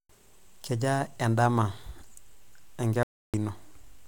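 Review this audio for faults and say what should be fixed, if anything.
At 3.03 s the speech cuts out to silence with no room tone, and resumes at 3.34 s, so about 0.31 s of audio is missing. This audio dropout to silence is likely an input that briefly disconnected or muted while the recorder kept writing silence. Secure cables and device connections, and monitor the input during recording so any gap can be caught and retaken.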